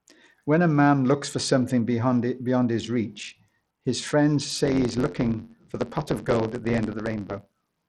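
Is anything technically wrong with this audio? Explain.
Yes, there are two faults. Throughout the speech, the treble sounds dull and unsteady, flickering in and out, with a gritty, grainy noise and aliasing on top. This likely comes from Bluetooth SBC compression at a low bit pool, which fits a bitrate around 80 kbps. SBC splits the sound into a few wide sub-bands and shares out bits without a hearing model, so the top bands starve and the rest are coarsely quantised.

From 4.64 s, right after "his reach his friends", until the end, a steady buzz at about 92 Hz sits under the speech, which also runs about 7% faster while keeping its timbre. This is a block size mismatch (truncated). One stage writes longer blocks, which fits 512-sample blocks, than the next stage reads, so the tail of every block is discarded. The regular cuts create the buzz, and the lost audio shortens time.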